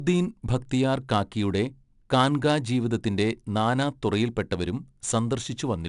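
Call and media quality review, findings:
Gritty hiss riding on all louder speech throughout, plainly audible; grainy, distorted consonant attacks; nothing above 10.6 kHz. Probable component: 4-bit ADPCM compression. Quantisation error tracks signal level, and step-size adaptation lags sharp onsets. Fits roughly 89 kbps.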